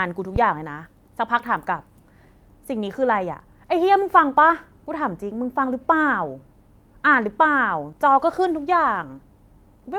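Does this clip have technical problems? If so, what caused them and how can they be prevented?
Yes. Phantom power was switched while the input was live, and the voltage step passed through the coupling capacitors. The result is a phantom power thump, a deep low-frequency thud from 0.36 to 0.67 s with a decay of about 70 ms. To prevent it, mute the channel or pull its fader down before switching phantom power, and let the supply settle before unmuting.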